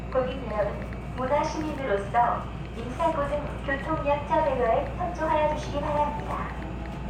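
Sounds, with no audible dropouts, distortion, glitches or level problems anywhere in the clip.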